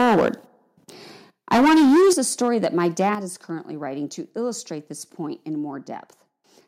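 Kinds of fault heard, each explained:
Microphone overload: 0.0 to 0.29 s, 1.51 to 2.13 s and 2.42 to 3.09 s, flattened, distorted peaks about 11, 13 and 2 dB over, likely from input volume set too high.
Microphone volume stepped down: at 2.13 s and 3.15 s, before "is currently writing to", level drops suddenly by about 9 and 6 dB, likely software cutting input volume after clipping.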